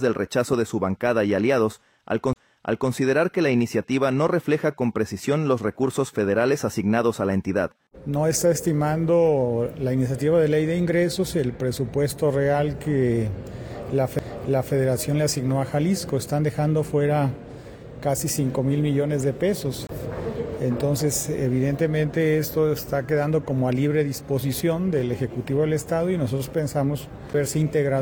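The laser jumps to another turn of the disc's spiral, causing a CD skip: a brief mute, a tick and a sudden jump, at 2.33–2.36, 14.19, 19.87–19.89 and 27.33 s.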